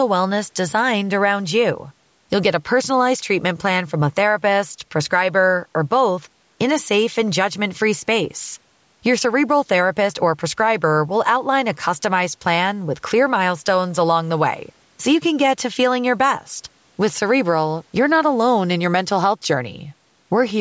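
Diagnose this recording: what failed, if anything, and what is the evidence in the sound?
Nothing failed: the speech carries the ordinary marks of call microphone processing, with the lowest bass trimmed by its high-pass filter and no content above 8 kHz, and no stage in the chain shows any fault.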